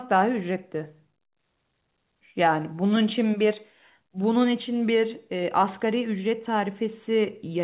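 There are no technical faults to describe in this speech, so there is nothing to place in time order.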